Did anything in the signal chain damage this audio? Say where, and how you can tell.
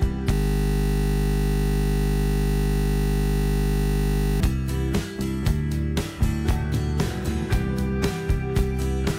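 Yes. A system hang loop at the driver or buffer stage: from 0.33 s to 4.40 s the computer or driver stalled while the audio hardware kept replaying the same 20 ms stretch of its ring buffer, about 200 times over. Because the looped piece is so short, it repeats at 50 Hz and comes through as a steady, flat buzz rather than a stutter. The original audio is completely replaced until the system recovers at 4.40 s.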